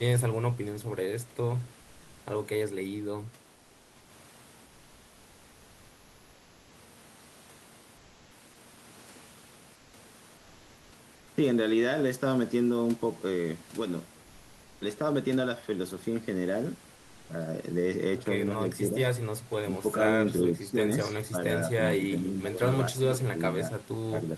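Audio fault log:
7.99–8.29 s, 9.79–9.91 s, 10.39–10.87 s, 14.23–14.77 s and 16.99–17.29 s: comfort noise in place of the background. In these pauses the real room noise gives way to a flat, featureless hiss at about the same level, likely because Opus DTX stopped sending audio while no speech was detected.
20.4–21.66 s, 21.99–22.61 s and 22.97–24.37 s: speech suppressed in double talk. The voice dips in pieces by roughly 10 dB, and by around 15 dB at the end. The echo canceller likely couldn't separate this talker from the far-end echo and turned both down.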